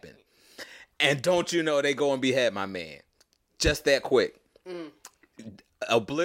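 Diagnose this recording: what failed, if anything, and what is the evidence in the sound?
Nothing in the recording stood out on listening as a technical problem at any stage of the chain.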